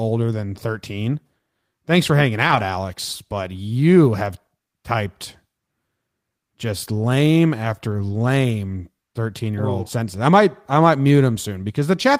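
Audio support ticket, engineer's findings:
Lost packets rebuilt from Opus in-band error correction: decoder played low-bitrate copies, so no gap but a rougher, noisier patch. 2.47–2.57 s after "for hanging" (about 60 ms, fits three packets); 7.91–7.93 s after "just lame" (about 20 ms, fits one).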